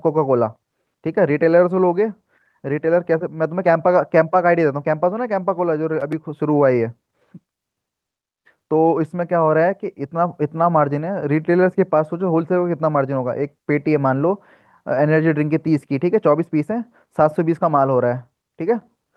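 Listening to the speech recording, nothing stood out as a technical problem at any point.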